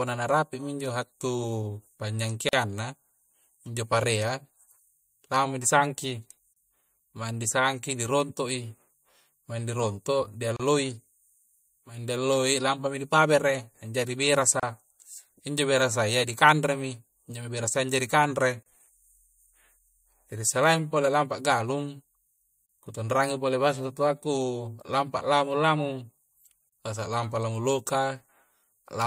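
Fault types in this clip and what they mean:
Gap at a join of encoded pieces: separately encoded speech segments joined untrimmed leave brief silences, about 32 to 43 ms, with smeared edges, roughly every 4 s.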